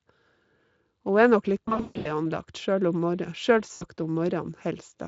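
From 1.65 to 2.27 s, VoIP packet loss concealed by the speech codec: about 320 ms of audio, scattered across roughly 400 ms, with the longest gap 140 ms, is extrapolated from the last pitch and filter into a buzzy tone or coloured noise that fades. The spectrogram shows smeared, repeating harmonics, and the waveform shows decaying amplitude. A shorter 80 ms gap at 3.73 to 3.84 s does the same, with the light Speex coding around it.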